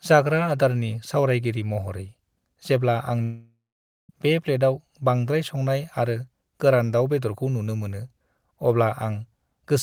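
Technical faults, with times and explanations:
3.23–4.10 s long network dropout: a fading buzz, then 0.52 s of silence; 0.86 s of speech never returns, likely packets lost in transit.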